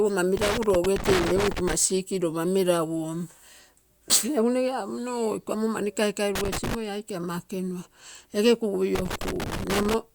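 Loose connector crackle chops the speech at 0.37–1.73 s, at 6.35–6.75 s after "iko omo mani kaikai", and at 8.95–9.94 s. Here a worn contact makes and breaks irregularly. The waveform shows ragged dropouts and spikes, and the spectrogram shows scattered broadband vertical streaks.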